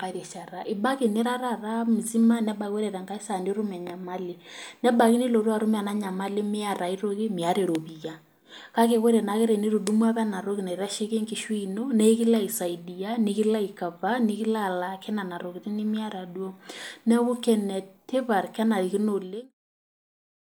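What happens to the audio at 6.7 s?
Nothing goes wrong at 6.7 s: the speech there plays through intact, with no dropout, click, distortion or level change.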